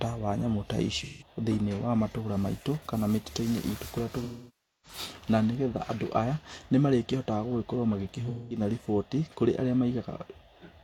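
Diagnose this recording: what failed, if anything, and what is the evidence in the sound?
Codec stage, AAC frame loss with concealment. The decoder refilled missing frames from the last good spectrum. This smears the sound at 1.03–1.27 s after "wa nyamũ ta" and at 8.29–8.60 s before "riboti kũrĩ arĩa". It fades away over 0.6 s at 4.23–4.98 s before "na nĩgetha andũ aya". On a spectrogram these show as frozen, blurred bands that decay.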